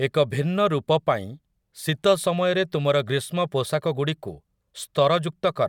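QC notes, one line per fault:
No faults detected.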